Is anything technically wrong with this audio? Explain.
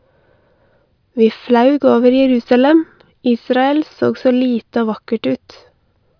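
No, nothing technically wrong here.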